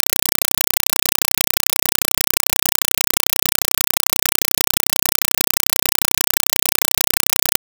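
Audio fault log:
throughout, compressed stream played as audio: in place of the music there is very loud, harsh static that chatters at 31.25 bursts per second. Each burst is a packed AC-3 frame, consistent with a 192 kbps Dolby Digital stream, read as if it were ordinary PCM samples instead of being decoded. About 4 ms of noise-like data fills each frame, and the zero padding after it leaves roughly 28 ms of silence before the next burst. That gap sets the rattling rhythm.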